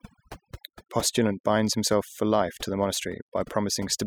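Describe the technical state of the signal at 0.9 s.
Overdone noise removal affects 0.9 s, as it does the whole clip: over-strong reduction mutes bands near the noise estimate, taking quiet parts of the voice with them and leaving twinkling near-silence.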